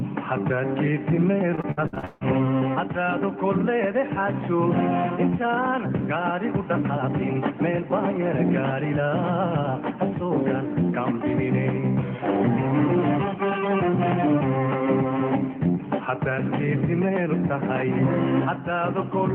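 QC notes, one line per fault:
1.55–2.23 s: repeated packet loss (robotic sound). Choppy stretch with pieces missing. Seven gaps arrive in quick succession, the longest 162 ms. Each is patched by extending the preceding sound, so concealment covers more than half the span.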